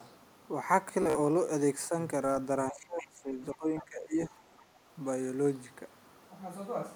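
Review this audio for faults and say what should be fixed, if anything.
Bluetooth stutter, 1.02 to 1.17 s. The sound catches and repeats in short bursts, with about 76 ms of audio missing across a span of roughly 122 ms. The longest unbroken gap is about 46 ms, and around five packets were lost in all. When packets arrive late or not at all, the receiver replays its last buffer, so you hear a brief machine-gun stutter before the sound picks up further along. To prevent it, shorten the distance to the Bluetooth device, reduce 2.4 GHz interference, or increase the receiver's jitter buffer.

Speech suppressed in double talk, 2.71 to 4.33 s. Over about a second and a half, the speech sinks in level, dropping at its deepest by roughly 20 dB. The likely cause is an echo canceller that found the far end talking at the same time. Unable to separate the local talker from the loudspeaker echo, it attenuated everything. 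To prevent it, tune the echo canceller's double-talk detection, or use a headset so there is less echo to fight.

Other side's voice leaking through, 3.79 to 3.84 s. A faint, short scrap of a second voice lasts about 50 ms and sits roughly 20 dB below the main speech. It falls inside the suppressed stretch. This is likely loudspeaker playback of the far end reaching the microphone, with the echo canceller failing to remove all of it. To prevent it, use headphones, or lower the loudspeaker volume and improve acoustic separation from the microphone.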